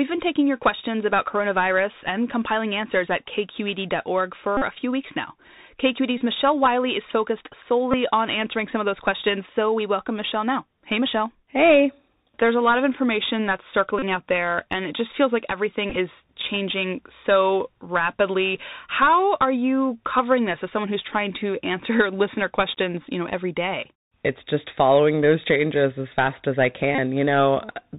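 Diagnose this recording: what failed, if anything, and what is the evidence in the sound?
The codec stage is degraded: the Bluetooth CVSD headset codec codes each sample as a single up-or-down bit at 64 kbps with an adapting step. Nothing above 4 kHz survives, s sounds turn scratchy, and a grainy hiss runs beneath the speech throughout.

The radio link between headset and phone dropped packets, and the chip re-decoded the previous one. This Bluetooth headset packet repeated fault gives brief buzzes near 267 Hz at 4.57–4.62, 6.18–6.21, 7.91–7.95, 13.99–14.03, 15.90–15.96 (broken into short bursts) and 26.95–26.98 s.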